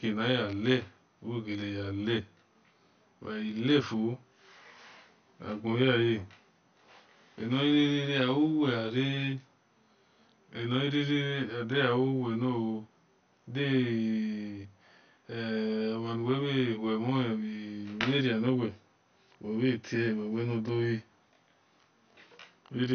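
From start to finish, one channel runs about 20 ms behind the other before the two are summed to mono. This channel delay causes comb filtering: cancellations fall at fixed, evenly spaced frequencies starting low, around 20 Hz, so the speech sounds rough or slightly doubled throughout.

Also present throughout, and likely caused by MP2 compression at a low rate (the damage fits roughly 48 kbps), upper sub-bands are starved of bits and switched off. Nothing remains above 6.5 kHz, leaving the speech dull, while the surviving bands carry a plainly audible gurgling, granular distortion.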